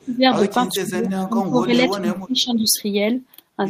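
From 0.00 to 0.24 s, and again from 0.77 to 2.68 s, the speech is likely suppressed in double talk: with both ends active, the echo canceller apparently could not tell the near talker from loudspeaker echo and attenuated everything. The speech dips by as much as about 20 dB, with the level pumping down in patches, roughly a fifth of a second in the first stretch and around one and a half seconds across the second.

From 2.71 to 2.82 s there is an echo leak, likely from a far-end loudspeaker whose canceller left residual pickup in the return path. A faint copy of the speech comes back about 0.44 s late, very quiet, around 35 dB below the direct sound, heard as a brief ghost just after the suppression lifts.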